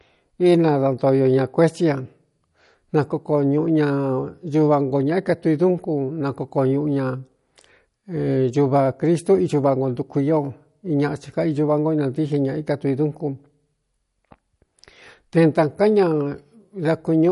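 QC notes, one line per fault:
Throughout: MP3 compression. Nothing sounds above 11.2 kHz, so the speech's treble is cut off flat. The damage is plainly audible, likely from a starved encoder at about 48 kbps. Weak frequency lines drop in and out between frames, leaving a watery swirl.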